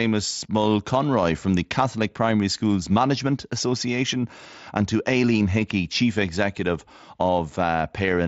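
Speech comes over a Bluetooth mSBC headset link, whose wideband limit and light codec graininess can be heard, and no technical fault occurs anywhere in the clip.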